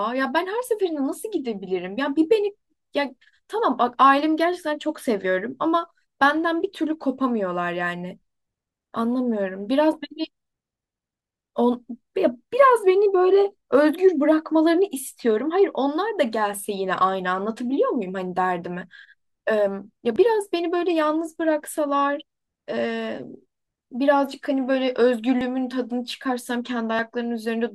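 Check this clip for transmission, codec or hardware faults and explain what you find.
Three short skips in the speech, at 20.16 s, 25.41 s and 26.99 s, each a jump in the sound. The likely cause is a dropped buffer (overrun): samples overwritten before capture, joining the audio across a gap of roughly 30 ms, 30 ms and 10 ms.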